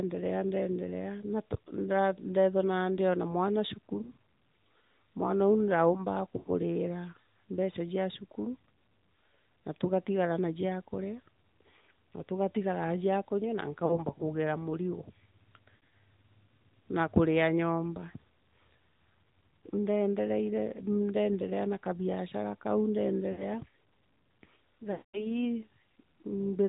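From start to finish the speech carries the sound of the AMR narrowband mobile codec, plainly audible. The band stops at 4 kHz, so sibilants are dull, and the thin, buzzy, synthetic edge on voiced sounds fits a mid-rate AMR-NB mode of around 10 kbps. The codec models the vocal tract and drives it with a sparse pulse excitation, which leaves this coarse texture.

Lost AMR speech frames break into the speech six times. At 4.02 to 4.09 s, about 20 ms of audio is concealed, consistent with a single frame, and it is heard as a brief dip. At 6.38 to 6.49 s, about 80 ms goes missing. At 13.86 to 14.05 s, about 40 ms is lost. At 15.77 to 15.90 s, about 120 ms is lost in scattered pieces over 160 ms, and the longest run is 60 ms. At 23.32 to 23.44 s, about 60 ms is lost. At 24.92 to 25.27 s, about 220 ms goes missing. In each case the decoder repeats the last good pitch and spectral settings at falling gain. 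The longer gaps smear and fade toward silence, and the speech comes back weak or rough for a moment.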